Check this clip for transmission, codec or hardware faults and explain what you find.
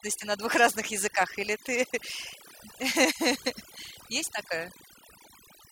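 One fault runs through the whole clip: overdone noise removal. A noise reduction stage was pushed too hard. It cuts individual frequency bands whenever they sit near its noise estimate, taking quiet speech detail too. The background drops and breaks up into twinkling specks.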